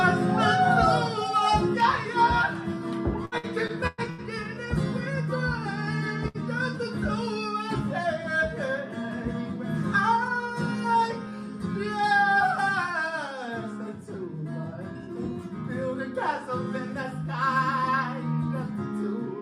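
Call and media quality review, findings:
Repeated packet loss (robotic sound), 3.25–4.21 s: choppy audio. Network path/receiver concealment. Five gaps, longest 109 ms, each patched by extending prior sound; about a third of the span synthetic, 180 ms of content lost.

Jitter buffer slow-down, 4.23–4.56 s: audio drawn out, pitch unchanged, running at 86% speed. Receiver jitter buffer rebuilding reserve by repeating short pitch-period segments, adding 56 ms.

Burst of packet loss, 6.28–6.37 s: brief held, fading fill, then audio resumes further along. Network/receiver concealment. Last sound extended and attenuated over 62 ms, 60 ms of content skipped.

Jitter buffer speed-up, 10.28–11.32 s: hurried audio, pitch unchanged, at 109% speed. Receiver jitter buffer draining excess backlog, likely from delayed packets arriving together, by cutting short pitch-period pieces, removing about a tenth of a second.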